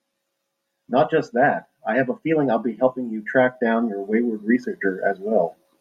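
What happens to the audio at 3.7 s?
Nothing goes wrong at 3.7 s; the speech carries on intact through that moment, with no dropout, click or distortion to be heard.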